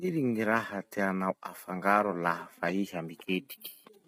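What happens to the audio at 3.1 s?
Low-delay AAC compression runs through the whole clip, including 3.1 s: the speech sounds rough and grainy, likely from short AAC-ELD frames at a low bitrate near 24 kbps, with nothing above 15.7 kHz.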